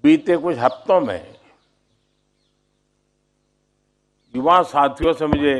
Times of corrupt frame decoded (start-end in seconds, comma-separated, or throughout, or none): 4.99-5.05